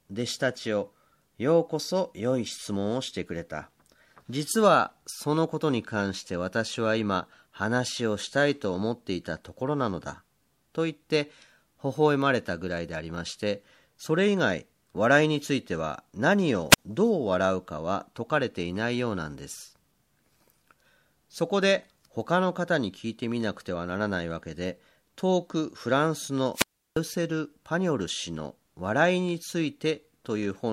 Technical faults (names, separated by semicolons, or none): wireless microphone squelch dropout